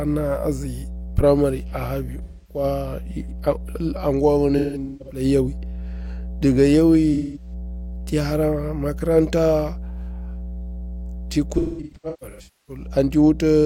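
Speech carries mains hum throughout: a steady 60 Hz tone with low harmonics, roughly 10 dB below the speech, consistent with a ground loop or nearby transformer coupling the power line into the signal. AAC frame loss with concealment occurs at 2.23–2.64 s, 4.57–5.24 s, 7.13–7.53 s and 11.57–12.87 s. The decoder fills the gaps from the last good spectrum, so these stretches sound smeared, noisy or phasey. About 256 ms, 384 ms, 213 ms and 853 ms go missing. The losses in the second and fourth regions are scattered, with the longest run about 300 ms in the last.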